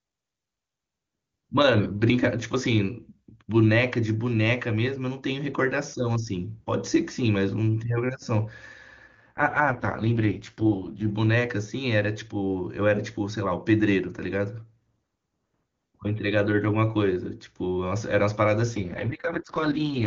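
In this speech clip the voice turns rough, raspy and synthetic from 9.07 to 11.10 s and again from 18.71 s to the end, with no gap or loss of bandwidth. This is an AMR rate drop, in which the AMR-WB link fell from its clean top rate to what sounds like its lowest, 6.6 kbit/s mode.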